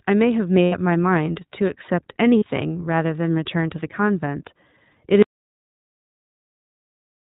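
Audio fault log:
throughout iLBC codec: narrowband, slightly rough and synthetic speech with nothing above 4 kHz, consistent with iLBC's 20 ms frame mode at about 15.2 kbps.
0.66–0.75 s and 2.39–2.44 s lost iLBC frames: brief held, buzzy vowel-like gaps of 80 ms and 40 ms as the decoder repeats the last pitch cycle with noise, then recovers immediately.
5.22 s to end audio dropout to silence: the speech cuts off abruptly into silence with no room tone, likely from lost input while recording continued.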